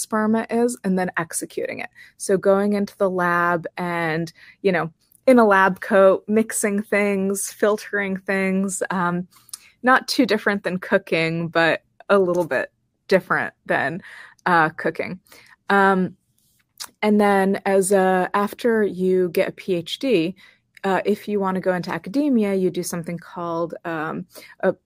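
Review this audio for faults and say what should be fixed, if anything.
A single sharp click at 9.96 s in the speech is likely dropped samples: a handful go missing, so the waveform jumps abruptly. Keep the capture chain's buffers from under-running so the sample stream stays continuous.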